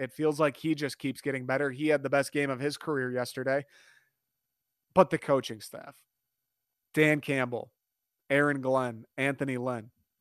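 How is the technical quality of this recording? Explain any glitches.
No technical glitches can be heard anywhere in the recording, so there is nothing to explain.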